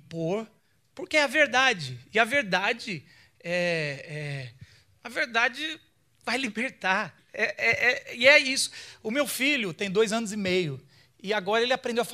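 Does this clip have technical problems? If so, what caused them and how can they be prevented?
No, this clip has no technical problems, so nothing needs to be prevented.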